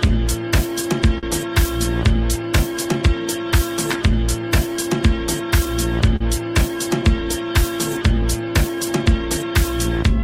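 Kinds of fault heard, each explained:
Clock drift between sender and receiver: The sending device's clock runs slow, by roughly 3 percent, compared with the receiver's, so the jitter buffer keeps draining and the receiver has to pad the audio to stay in step. Throughout the clip this shows as small, unevenly spaced timing hiccups. On a waveform the envelope looks faintly stretched in places, and a spectrogram shows occasional smeared or doubled columns where short pieces were repeated.
Short stall from a late packet: Twice a packet arrived late and the buffer ran dry. The receiver held the last sound until it came, for 44 ms from about 1.18 s and 42 ms from about 6.16 s. Nothing is lost, but the held sound lingers with a slight buzz or dip. A spectrogram shows a brief band of frozen, horizontally smeared energy, and a waveform shows a short, looped-looking segment.
Repeated timing corrections: From about 2.98 s to the end, the receiver keeps inserting small repeated slices to make up for the slow sender. 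Playback runs at about 98 percent speed, and roughly 150 ms in total is added. Each edit is tiny and all go the same way, but they are unevenly spaced. The waveform shows scattered duplicated micro-segments, and a spectrogram shows faint vertical seams at irregular spacing.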